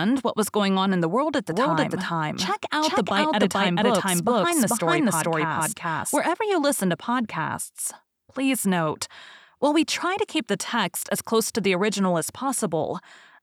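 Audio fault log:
1.52–6.18 s, doubled audio track: a second path is likely feeding the same signal into the mix with about 0.4 s of lag, or an edit has left two copies running out of step. The result is a full-band repeat of the speech trailing the original by roughly 400 ms at much the same level, with no decay or room colour to it, so each syllable lands twice as a distinct repeat. The copy switches on abruptly at 1.52 s and cuts off just as sharply at 6.18 s.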